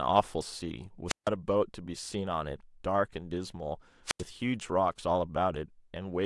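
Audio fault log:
1.07 to 1.29 s and 4.05 to 4.23 s, wireless microphone squelch dropout: the microphone's FM radio link faded until the receiver's squelch shut the output. A short rise of hiss gives way to near silence lasting 154 ms and then 88 ms before the speech returns.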